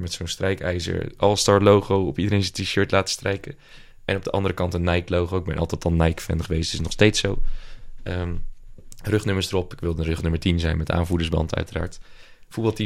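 Speech recording with nothing technically wrong to point to at any time.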